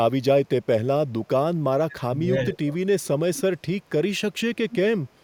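Speech suppressed in double talk at 1.88 to 2.32 s and again at 2.51 to 3.07 s. The speech sinks sharply, by about 20 dB in the first stretch and about 15 dB in the second, and comes back between them. The likely cause is that the far side talked at the same moment and the echo canceller, unable to tell this talker apart from its own loudspeaker echo, attenuated everything during the overlap.

Echo leak at 3.35 to 3.42 s and at 4.71 to 4.75 s. Brief, faint scraps of speech return 228 ms after the original, sitting about 20 dB and then about 15 dB below the main voice. This is likely a loudspeaker-side echo canceller failing to remove all of the sound its microphone picked up, letting a short, delayed remnant travel back down the call.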